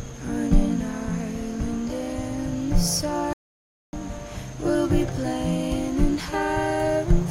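A playback stall begins at 3.33 s: the player most likely ran out of buffered data, or its playback thread was held up, so nothing reached the output until it caught up. The sound cuts off abruptly in mid-flow and a dead silence of about 0.6 s follows, lasting until 3.93 s, when the audio comes back in.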